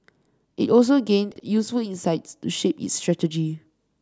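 At 1.32 s a chunks out of order fault occurs: one 40 ms block of audio was delivered or written one slot late, so it plays after the block that should have followed it. Between 1.32 and 1.40 s the two blocks are swapped. Nothing is missing, but the speech is stitched together in the wrong order, with three hard joins. The result is a brief jumbled moment.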